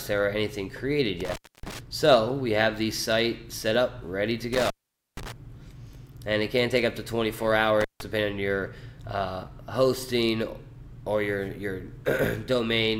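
Intermittent contact breaks the sound three times: from 1.20 to 1.79 s, with the line open for about 0.28 s; from 4.53 to 5.32 s, open for about 0.47 s; and from 7.81 to 8.01 s, open for about 0.16 s. A loose plug or cable briefly loses its connection, so the signal drops out with crackle as the contact scrapes open and closed, leaving faint hiss in between. That crackle and residual hiss distinguish it from a clean digital dropout.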